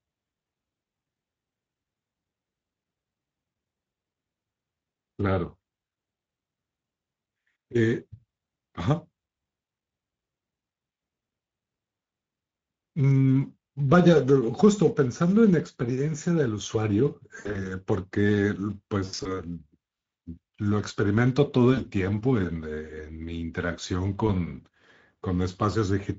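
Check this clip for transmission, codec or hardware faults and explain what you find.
There are two things going on here: the Speex codec coloring the whole recording, plus a cluster of packet-loss dropouts in the back half.

Throughout, the Speex codec at about 16.8 kbps is plainly audible. This CELP coder doesn't have many bits for the excitation, so the speech comes out hoarse and grainy, with a noisy texture rather than clean voicing.

Then there's VoIP packet loss concealed by the speech codec at 17.39 to 17.70 s, 19.05 to 19.42 s, 21.73 to 21.87 s and 24.27 s. The decoder keeps extending its last pitch and filter and lets the gain sag, so those spots smear into a fading buzz or coloured noise, and the voice stays weak briefly afterward.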